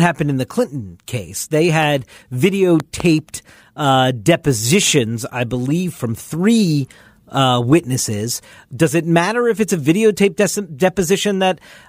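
A speech clip with two loud pops. The first is a single sharp pop at 1.83 to 1.85 s, peaking a few dB above the speech. The second, from 2.80 to 3.02 s, is a pair of pops in quick succession, around 10 dB above the speech. The speech carries on underneath both. The likely cause is a sudden voltage spike from a plug, switch, static discharge or driver glitch, shaped into a brief pulse by the circuits after it.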